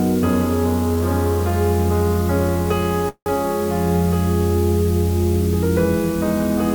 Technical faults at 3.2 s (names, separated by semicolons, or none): low bit depth with dither; call audio freeze